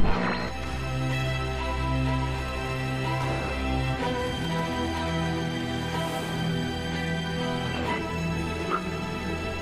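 Nothing stood out as a technical problem on listening to this recording.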